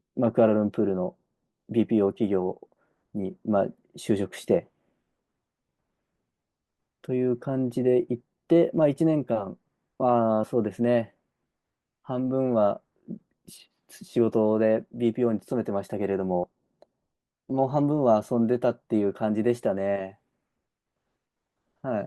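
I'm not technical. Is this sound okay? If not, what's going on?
No. At 10.43, from 14.93 to 14.96, and at 16.43 s, compressed frames are skipped: tiny 20 ms pieces of the speech, about two pieces at 16.43, are missing.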